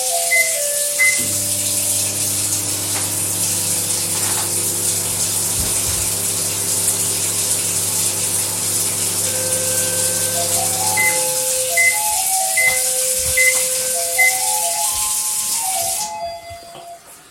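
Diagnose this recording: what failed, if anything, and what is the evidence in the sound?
Nothing failed in this recording, and the sound carries no evidence of any fault.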